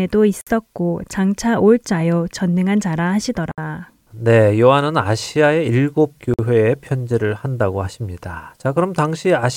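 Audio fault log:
0.41 s, 3.51 s and 6.34 s, gap at a join of encoded pieces: the speech appears to have been encoded in separate sections and spliced without trimming each encoder's start-up delay and final-frame padding, so both stay in the stream. At each join the speech drops into silence for about 54, 64 and 49 ms respectively, with its edges smeared by the codec, then resumes exactly where it left off.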